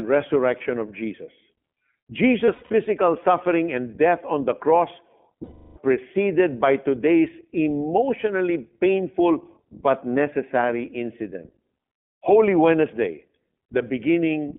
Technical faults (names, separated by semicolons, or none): iLBC codec; lost iLBC frames